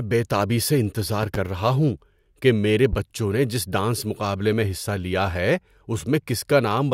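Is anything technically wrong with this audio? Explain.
Yes, there are three loud pops. A sudden voltage pulse, likely from a plug, switch, static or driver glitch, enters the signal chain and is shaped by the circuits after it into a sharp burst. From 1.23 to 1.37 s, after "بے تابی سے", two pops land in quick succession; a single one follows at 2.93 to 2.96 s, after "رہا ہوں کہ میرے". Each peaks about 10 dB above the speech, which carries on underneath.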